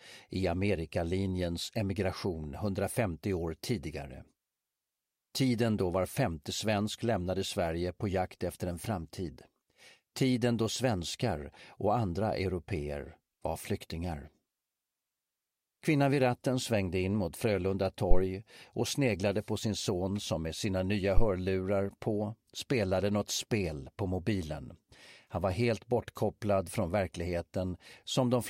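At 18.11 s and again at 21.17 s there's a phantom power thump: the supply switching on or off on a live input sends a DC step through the coupling capacitors, giving a deep thud that peaks around -10 to -11 dBFS and dies away within about a tenth of a second.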